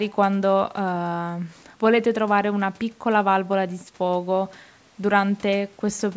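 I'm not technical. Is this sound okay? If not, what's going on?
Yes, this speech recording is fine. It went through the normal microphone processing of a call, which trims away the deepest bass and anything above about 8 kHz, so it sounds like a typical phone or video call.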